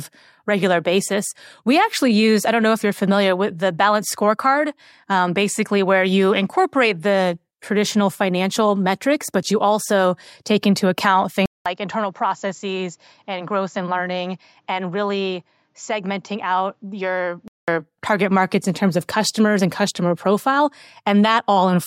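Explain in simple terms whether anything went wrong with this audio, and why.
Input switched to a poorer device, from 11.46 to 17.68 s: after a 0.2 s gap, the speech turns duller and a little quieter, loses its crispest sounds above 7.6 kHz, and gains faint new background noise, likely because recording jumped to a lesser microphone.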